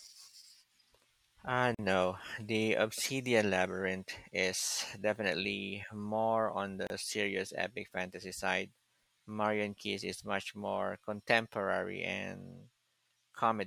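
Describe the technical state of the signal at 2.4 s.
At 2.4 s the speech signal is intact, with no audible dropout, distortion, glitch or other fault.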